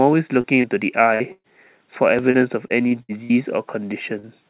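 Short concealed packet loss occurs at 0.41 to 0.47 s and again at 0.62 to 0.67 s, each time with about 30 ms of speech that never arrived in time. The decoder bridged each hole by extending the preceding sound for 20 to 25 ms and then blending back into the real signal. The result is a brief smear or wobble, and a short consonant can drop out. The same fault recurs at 4.20 to 4.26 s, with roughly 34 ms patched over a 30 ms loss.

A burst of packet loss follows at 1.15 to 1.23 s, where about 60 ms is missing and around 53 ms of synthetic continuation is heard. A longer burst at 1.32 to 1.47 s removes about 120 ms. Here the concealment stretches the last sound into a held, decaying buzz or hiss, which fades to roughly 50 ms of silence before the audio picks up further along, with the intervening stretch gone.

At 2.19 s a small forward jump in the sound is heard, with no gap. It is likely a dropped buffer (overrun), where samples were overwritten before being read and the two sides were spliced together directly, losing only a few milliseconds.

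From 2.31 to 3.33 s comes repeated packet loss with a robotic sound. Five separate gaps totalling about 210 ms fall within this one-second stretch, and the longest is 60 ms. About a fifth of the span is concealment, and the quick succession of patched holes gives a choppy, robotic quality with fragments missing. Throughout, the audio is band-limited with nothing above 4 kHz, consistent with a G.711 mu-law call path at 64 kbps.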